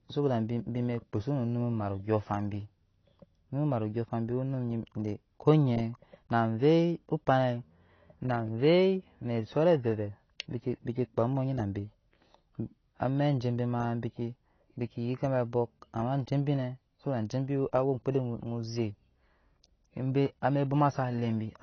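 From start to finish the speech carries AAC compression damage that is plainly audible: the top end stops dead at about 6.6 kHz, leaving sibilants dull and smeared, with a warbling, fizzy texture on sustained sounds. The likely cause is AAC-LC at a low bitrate, which fits something near 24 kbps, where the encoder lowers its cut-off and starves bands of bits. A spectrogram would show a hard ceiling near 6.6 kHz with patchy holes below it.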